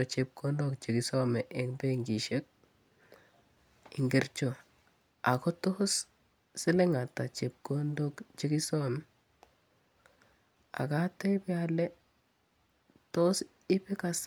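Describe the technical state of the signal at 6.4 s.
At 6.4 s the speech signal is intact, with no audible technical fault at that moment.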